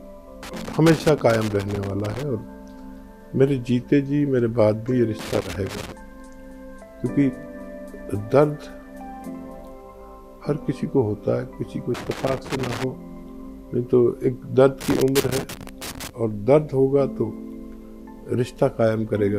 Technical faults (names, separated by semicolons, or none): loose connector crackle